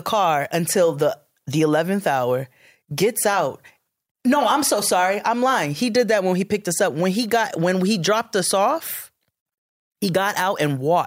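A speech clip with a block size mismatch (padded) from 8.85 to 9.67 s. A 46.9 Hz buzz rides on the speech, consistent with a stage reading 1024-sample blocks while receiving shorter ones, the shortfall zero-filled. Timbre holds, and playback runs only marginally slow (0.999x).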